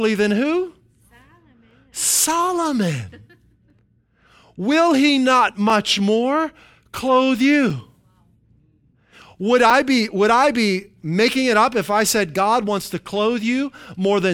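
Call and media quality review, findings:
Periodic USB or driver dropouts in the speech, 1.70 to 9.70 s. Regular ticks every 2.0 s, about five in all, ending just before "be would I be". Each is a gap of a few ms filled with silence. Points to something on the USB bus or audio driver stalling the stream on a fixed timer.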